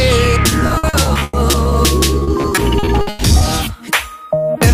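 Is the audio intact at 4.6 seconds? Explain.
Yes, the audio at 4.6 seconds is intact, with no dropout, glitch or other fault at that moment.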